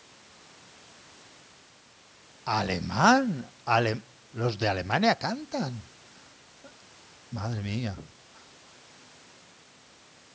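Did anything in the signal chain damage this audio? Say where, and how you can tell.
No, nothing in the signal chain damaged this speech. It has passed through a call's microphone processing, which trims the lowest bass and leaves nothing above 8 kHz, as that stage normally does.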